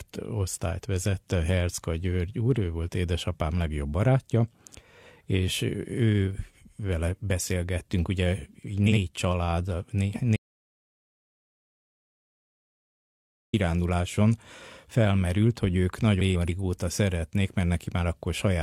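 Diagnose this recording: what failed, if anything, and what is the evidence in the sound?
Frames out of order, at the network or packet-ordering stage ahead of the decoder. Just after "ő vele beszélgettünk ugye", 8.86 to 8.98 s plays as two swapped 46 ms blocks, fitting single codec frames. After "felmerült hogy ők", 16.2 to 16.5 s swaps 139 ms blocks, fitting three-frame runs. Both produce garbled flutter, and no time is lost.

Audio dropout to silence at the capture or input stage. From 10.36 to 13.53 s, about 3.17 s, the speech cuts off mid-flow into silence with no room tone, then resumes abruptly. The likely cause is lost input, with the recorder writing silence through the gap.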